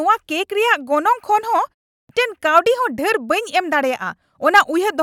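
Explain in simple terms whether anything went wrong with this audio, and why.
At 1.97 s, after a short pause of about 0.31 s, the sound comes back abruptly with its beginning missing. This is a clipped start after a pause: the playback device powered down or lost its timing lock during the silence and took a moment to restart. About 120 ms of speech, up to 2.09 s, was swallowed while it woke, so the first sounds of the next word never reached the output.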